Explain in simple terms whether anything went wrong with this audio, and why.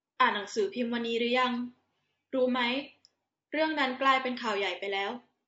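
Yes, the speech sounds rough and grainy from start to finish, with a hiss between the tones of the voice and a dull top end. That points to low-delay AAC compression, likely the kind used for video calls, squeezed so tightly that it captures voice detail poorly.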